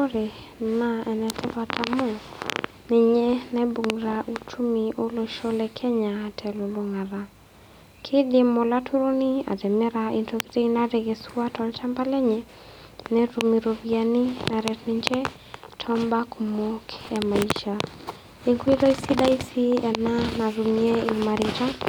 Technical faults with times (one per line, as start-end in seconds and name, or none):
5.79-5.82 chunks out of order
17.01-17.06 chunks out of order